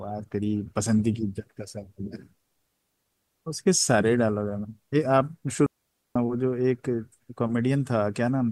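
At 5.66 s the speech drops into a clean hole of near silence lasting about half a second, roughly 0.49 s, before resuming at 6.16 s. There is no burst of noise or crackle on either side of the gap, just a quick fade down and back. That silent, tidy cut is the mark of a digital wireless dropout: the receiver lost too much of the incoming data stream to rebuild the signal, so it muted briefly rather than output corrupted audio.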